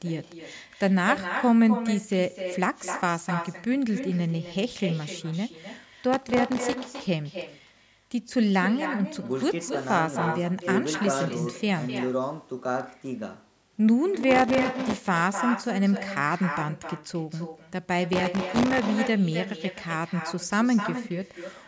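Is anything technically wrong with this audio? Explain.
Yes. An echo with no canceller runs through the whole recording. The far end's microphone picks up its loudspeaker, so the speech returns about a third of a second later, roughly 9 dB quieter.

Processor overload crackle appears at 6.13 to 6.85 s, 14.21 to 15.08 s, and 18.13 to 18.84 s. The processor misses many very short buffer deadlines in a row, each well under a millisecond, and repeats old audio in each gap. This is heard as gritty, tearing crackle.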